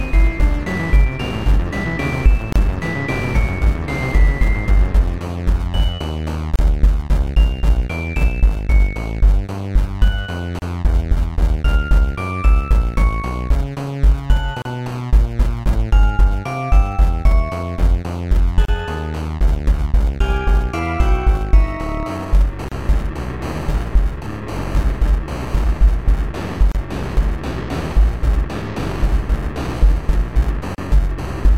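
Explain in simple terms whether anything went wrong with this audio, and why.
Eight short dropouts come at 2.53, 6.56, 10.59, 14.62, 18.65, 22.68, 26.72 and 30.75 s. Each lasts about 32 ms, one every 4 s. This is a gap at a join of encoded pieces. Each separately compressed chunk kept its padding silence.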